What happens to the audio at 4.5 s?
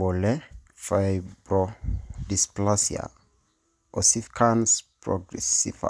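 Nothing goes wrong at 4.5 s; the speech carries on intact through that moment, with no dropout, click or other fault to be heard.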